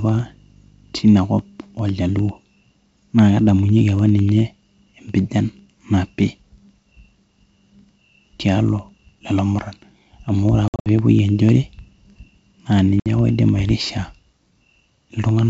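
From 0.09 s to 15.39 s, periodic USB or driver dropouts cut the audio to silence for roughly a tenth of a millisecond every 0.1 s. Because the spacing is exactly regular, the result is a steady ticking rather than random crackle.

At 10.68 to 10.87 s, packet loss on an ADPCM call leaves about 150 ms of holes spread over 180 ms, the longest lasting 60 ms. Another 60 ms gap follows at 13.00 to 13.07 s. Unlike the tiny ticks, these are hard-edged silences. The mismatched predictor then brings the sound back slightly distorted before it settles over the G.722 wideband band.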